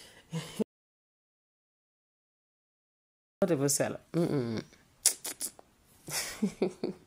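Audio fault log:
0.62–3.42 s, audio dropout to silence: the speech cuts off dead for about 2.8 s of silence, no room tone, likely a lost input while recording continued.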